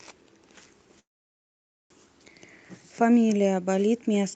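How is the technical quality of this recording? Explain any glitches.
The recording has one clear glitch, a call audio freeze from 0.99 to 1.92 s. Packets were likely held up in transit, so the jitter buffer ran dry. A brief fading continuation of the last sound gives way to about 0.87 s of silence. Then the speech resumes where it stopped, with nothing lost, but it is now running roughly 0.9 s later than before. The speech is band-limited to about 8 kHz, which fits an Opus call codec.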